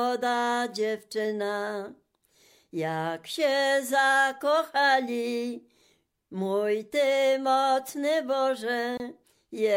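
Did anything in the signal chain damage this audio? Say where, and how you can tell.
Yes. At 8.97 to 9.00 s a gap at a join of encoded pieces opens: about 25 ms of near-silence cuts into otherwise continuous sound, which then carries on from where it stopped. The damage sits at the codec stage. The audio was encoded in separate pieces and joined without trimming, so encoder start-up delay and last-frame padding remain as dead air. The waveform drops to near-silence, and the spectrogram shows a narrow blank vertical stripe whose edges are smeared by the codec.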